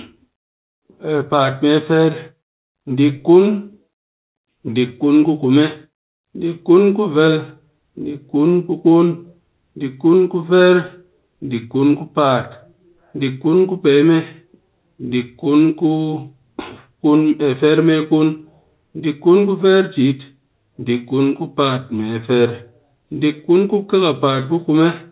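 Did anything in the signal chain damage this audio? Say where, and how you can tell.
No, nothing in the chain has damaged this speech. What can be heard is G.711 telephone coding working as intended: mu-law at 8 kHz, so nothing above 4 kHz gets through, and a faint noise rises and falls with the level of the speech.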